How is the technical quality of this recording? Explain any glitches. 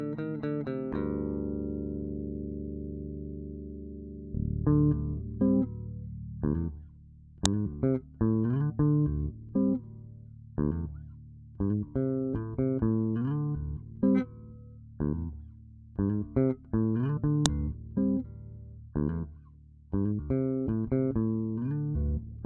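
There are two glitches, both the same problem: a file header played as audio, at 7.46 s and again at 17.46 s. The 10 s spacing suggests the audio was assembled from separate WAV pieces joined or streamed without stripping their headers, so those few dozen bytes of metadata get played as if they were samples. What you hear is a sharp, loud click or snap at each join, cutting in regardless of what the sound is doing at that moment.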